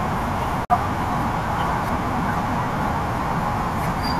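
At 0.65 s the speech cuts out in a digital broadcast dropout lasting to 0.70 s. The sound fades to silence in about 3 ms. The hole is roughly 50 ms long, which fits two lost frames. The receiver failed to decode those frames and muted until good ones returned. Speech resumes later in the programme, not where it left off. The audio sent during the gap is gone.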